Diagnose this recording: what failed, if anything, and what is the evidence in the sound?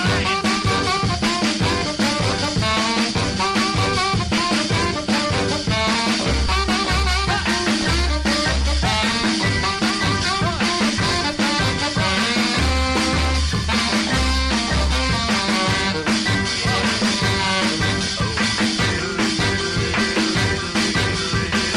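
Lost LE Audio frames on the Bluetooth link, concealed by the LC3 codec. At 4.37 s a 7.5 ms gap, fitting one frame, and at 6.47 s a 15 ms gap, about two frames, become brief noisy smears, not silent dropouts or clicks, because the decoder replays the previous spectrum with scrambled phase.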